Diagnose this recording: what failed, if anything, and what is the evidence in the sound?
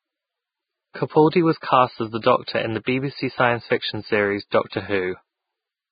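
The speech has nothing above 4.9 kHz, and its upper band is hissy and grainy throughout. This points to the codec stage, likely Vorbis compression at a very low bitrate, around 14 kbps. Its coarsely quantised treble turns fine detail into noise.

Pre-echo appears at 2.84 to 2.87 s, just after "in the", then at 3.70 s and at 4.70 to 4.72 s. Brief hiss, 18 to 31 ms long, precedes sharp onsets. The codec spreads noise across each block, so it fills the quiet before each attack.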